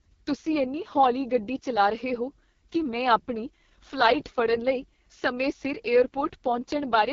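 From start to finish the speech sounds rough and raspy, with a buzzy, grainy edge on every syllable and nothing audible above about 7.2 kHz. This is the AMR wideband (HD Voice) codec working at its bottom rate, which fits the 6.6 kbit/s mode. There are too few bits for its pulse-driven model of the vocal tract to capture the voice cleanly, and the top band above 6.4 kHz is filled with shaped noise instead of real detail.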